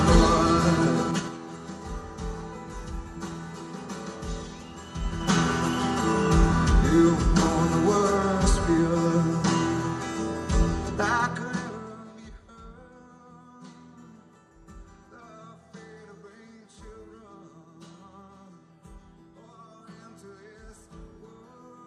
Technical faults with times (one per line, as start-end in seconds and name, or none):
1.02-1.37 zipper noise